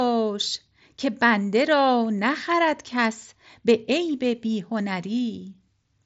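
Nothing technically wrong turns up in this bit of speech; it comes across the way audio normally does over an mSBC Bluetooth headset link, with the top end stopping around 7.7 kHz.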